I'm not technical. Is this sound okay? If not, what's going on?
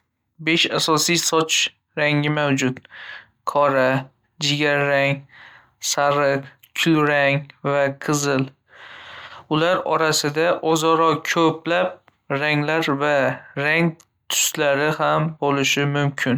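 Yes, nothing wrong can be heard in this recording.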